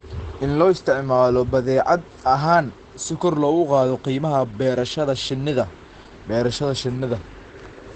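Throughout, the speech is muffled and hoarse. Nothing survives above 9.1 kHz. The likely cause is heavy Opus compression in speech mode, near 12 kbps.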